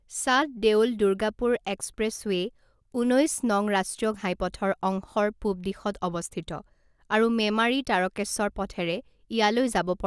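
Speech with aliasing throughout: content above 12 kHz folds back as gritty, metallic sibilance roughly 25 dB down, which fits downsampling to 24 kHz without an anti-aliasing filter.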